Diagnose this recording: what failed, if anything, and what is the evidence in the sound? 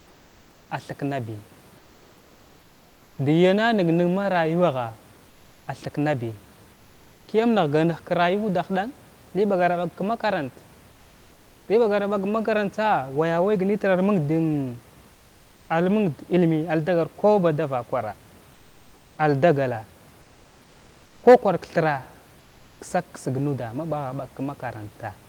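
Codec stage: in the pauses at 0.0–3.17, 5.29–7.27, 10.91–11.67, 15.13–15.69 and 18.53–22.79 s, the room background turns into flat, featureless comfort noise, about 2 to 3 dB quieter in the 10.91 and 15.13 s pauses. That's likely Opus DTX: the sender stops between phrases and the receiver fills in synthetic noise.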